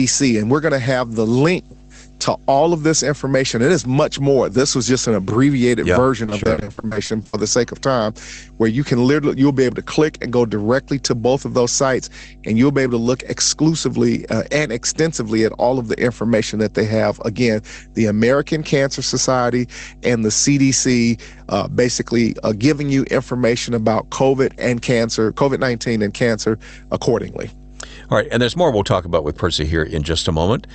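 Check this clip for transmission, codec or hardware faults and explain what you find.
Two faults stand out in this speech recording: a steady mains hum under the whole clip, and a burst of repeated packet loss early on. The call codec's band limit, with nothing above about 8 kHz, is expected rather than a fault.

Mains hum runs for the entire clip as a constant 50 Hz tone with low harmonics, about 20 dB below the speech. A ground loop or nearby transformer is feeding the power line into the signal. Its unchanging pitch and level set it apart from rumble or handling noise.

Repeated packet loss (robotic sound) occurs from 6.25 to 7.35 s, between "just an abbreviated yeah" and "the sake of time". Packets kept arriving late or not at all, and each hole was patched by stretching the previous sound. Gaps reach 60 ms, and roughly 42% of that stretch is concealed, giving a choppy texture with pieces missing. 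A single dropout would sound like one isolated glitch.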